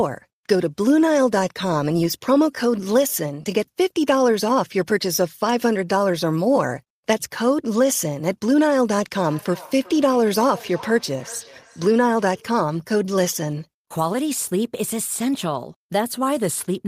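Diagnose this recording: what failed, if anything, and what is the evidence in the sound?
From 9.16 s to 12.63 s the speech comes back as a thin, ringing repeat roughly every 0.4 s, peaking about 19 dB below the direct voice. This is feedback echo between two devices at the call-processing stage: a second device replays this microphone's audio into the room, and this device's echo canceller cannot remove sound it did not play.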